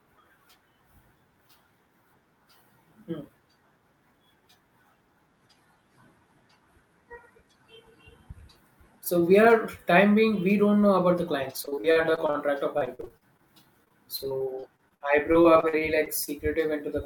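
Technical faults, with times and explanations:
11.65–12.36 s, 12.78–13.40 s and 13.84–16.29 s, repeated packet loss (robotic sound): 8 to 17 short holes per stretch, each at most 56 ms, are patched by repeating sound, giving a choppy sound with pieces missing rather than one clean dropout.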